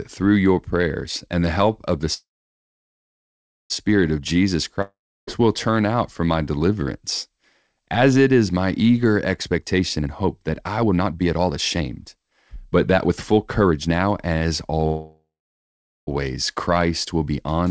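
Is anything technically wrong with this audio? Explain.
Yes, the speech has four call-path faults: two freezes, a dropout and a stretch of hurried playback. Throughout, nothing is heard above 8 kHz, which fits a wideband call codec such as G.722 at 64 kbps.

Call audio freeze, 2.14 to 3.72 s and 14.86 to 16.09 s: Right after "the help of the", the last sound smears into a brief fading buzz, and then about 1.46 s of silence follows before the speech resumes exactly where it stopped. The later freeze behaves the same way, with about 0.8 s of silence inside a 1.21 s gap. The likely cause is delayed packets draining the jitter buffer. The receiver stretched out the final sound and then waited, so the gaps were inserted into the speech and none of it is missing.

Long network dropout, 4.82 to 5.29 s: Just before "will turn out for", the sound trails off into a short fading buzz and then about 0.33 s of silence. 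When the speech returns, it has jumped ahead, and roughly 0.46 s of the original never plays. This likely happened because no packets arrived for that stretch. The receiver covered the gap with decaying concealment and then resumed further on, skipping the lost audio.

Jitter buffer speed-up, 9.47 to 14.86 s: After "it is my eager", the speech runs at about 126% of its normal pace while its pitch stays the same, so it sounds rushed. The jitter buffer had built up excess audio, so it repeatedly cut out short slices of one or a few pitch periods to reduce the delay, trimming around one and a half seconds over the stretch.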